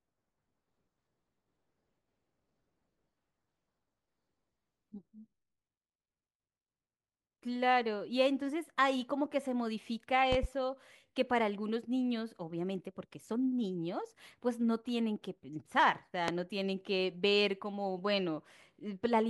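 At 10.32 to 10.47 s a loud pop arrives as a pair of sharp thumps, peaking roughly 15 dB above the speech. A single, louder one follows at 16.28 to 16.32 s, about 20 dB above it. Each is likely a voltage spike from a plug, switch or static discharge entering the chain. What separates these from a dropout or clipping is that the speech carries on unbroken and undistorted beneath each brief pulse.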